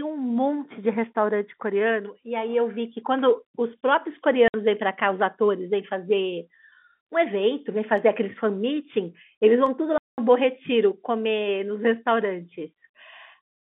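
At 4.48 s the speech drops into a dead, hard-edged hole lasting 60 ms, and a longer one opens at 9.98 s for 200 ms. This is packet loss filled with silence: the receiver had nothing to play and substituted silence. Both lengths are multiples of 20 ms, which fits 20 ms packets. The narrow band-limited telephone sound of the G.711 line carries on around the gaps.

Three isolated sharp clicks sit at 7.00, 7.98 and 9.66 s. Each is a brief tick with nothing audibly missing. The likely cause is dropped samples: a fraction of a millisecond of the stream vanished, so the waveform leapt straight to a later value. That step produces the click, and too little was lost to hear any sound disappear.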